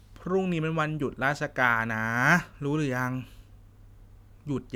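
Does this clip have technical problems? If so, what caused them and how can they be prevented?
No, there are no technical problems to report in this clip. With nothing going wrong, there is no cause to trace and nothing that needs preventing.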